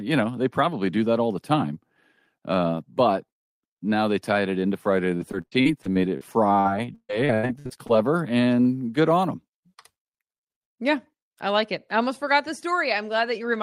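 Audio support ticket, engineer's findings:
Repeated packet loss (robotic sound), 5.17–6.23 s: choppy patch, a string of short holes up to 60 ms, about a fifth of the stretch filled in. Network jitter or loss, with concealment stretching the last sound over each hole.

Same again, 6.61–7.91 s: rougher, with holes up to 140 ms and roughly a third of the stretch concealed. Probably the same congested link.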